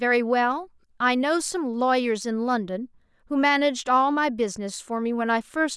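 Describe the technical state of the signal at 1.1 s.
At 1.1 s the speech signal is intact, with no audible fault at that moment.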